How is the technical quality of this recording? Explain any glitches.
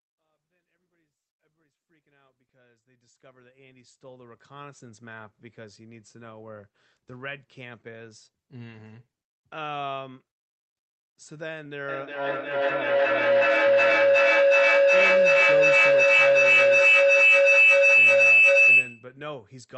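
The recording has one serious fault: a feedback howl that takes over the last part of the clip. From 11.89 s to 19.17 s, a tone near 3 kHz swells to about 18 dB above the speech. Two devices on the same call share a room. Each pass from loudspeaker to microphone adds gain, so the sound rings louder instead of dying away. The loop's delay is roughly 400 ms. The level rises smoothly from silence to 4.96 s at the start, and the audio stops short of 8 kHz, which fits a call codec's bandwidth.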